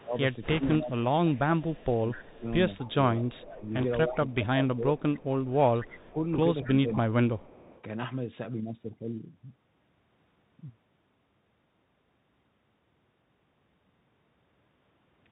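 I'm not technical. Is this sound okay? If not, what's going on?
No. The whole clip goes through a Bluetooth CVSD headset codec. It sounds narrow and muffled, with a grainy hiss, and s sounds come out scratchy.

From 0 to 4.35 s, 5.15 to 6.1 s and 6.64 to 7.82 s, a faint copy repeats about a quarter second late. This is likely an echo leak from a loudspeaker.

Between 0 and 6.9 s, the talker dips sharply or drops out, about three seconds in total. The likely cause is speech suppressed in double talk, when both sides spoke at once.

At 0.43 to 0.75 s and 3.75 to 3.85 s, a rushing crackle appears. These are bit errors on a Bluetooth voice link.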